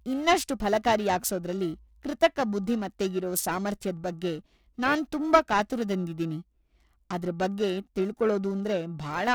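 A rough, metallic edge rides on the speech throughout, gone in pauses: periodic clock jitter, the converter clock wobbling at around 1 kHz, adds sidebands.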